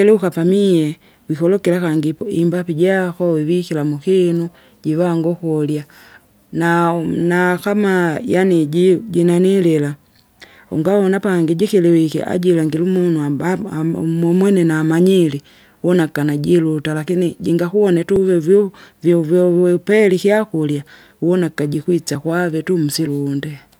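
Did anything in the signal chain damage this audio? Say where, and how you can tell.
Yes, audio missing between chunks at 2.21 s and 18.16 s: about 10 ms drops out and the edges butt together, likely a recording buffer losing samples at chunk handover.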